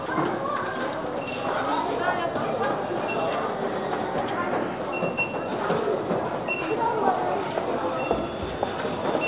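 At 0.06 s the sound briefly gives way to a steady noise for 20 ms. This is likely sound dropped by the voice detector, with comfort noise filling the gap. On a spectrogram it appears as a thin vertical band of flat, featureless noise, still capped near 4 kHz like the rest of the call-path audio.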